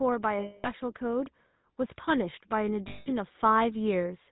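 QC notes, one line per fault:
Throughout: GSM full-rate codec. The speech has that buzzy, gravelly grain because the codec rebuilds the voice from a vocal-tract model driven by sparse pulses, at about 13 kbps. Nothing gets through above 4 kHz, so it sounds dull and phone-like.
0.40–0.69 s and 2.88–3.07 s: lost GSM frames. Both times the sound freezes into a rough, metallic ring as the decoder keeps replaying its last good settings. The gaps run about 240 ms and 180 ms, which fits whole 20 ms frames going missing.
2.05–4.17 s: automatic gain rising. The gain control decided the input was too quiet and slowly pushed it up by about 4 dB. The speech and the background swell together over those two seconds rather than jumping, which is the giveaway.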